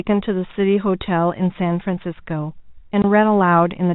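At 3.02 to 3.04 s, packet loss filled with silence cuts a 20 ms hole in the speech. That fits one lost packet. Its edges are hard.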